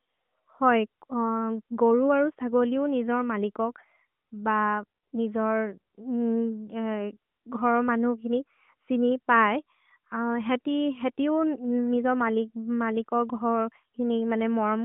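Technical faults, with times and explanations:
No technical faults detected.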